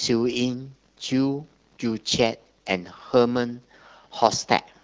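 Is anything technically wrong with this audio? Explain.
No, no technical faults.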